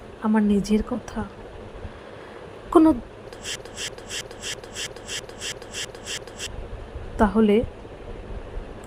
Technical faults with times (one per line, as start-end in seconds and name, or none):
3.55-6.46 broken-record loop